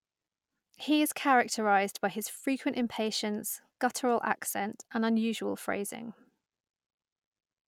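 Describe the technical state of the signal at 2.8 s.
At 2.8 s the audio is intact, with no dropout, distortion, noise burst or other technical fault at that point.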